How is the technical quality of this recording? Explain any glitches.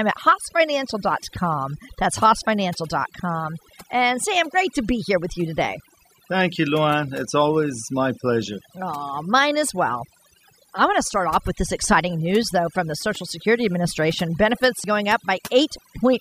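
The recording has two problems, one running through the whole clip and one short glitch near the end.

Throughout, there's overdone noise removal. The denoiser was pushed too hard, so it clamps individual frequency bands down whenever they sit near its noise estimate. The background drops and breaks up into twinkly specks, and the voice's quieter detail got cut along with the noise.

At about 14.84 s there's a quick blip from damaged data in the compressed stream. A stretch of corrupted bytes threw the decoder off, so it misread that frame and had to hunt for the next valid header. You hear it as a brief glitch in the audio.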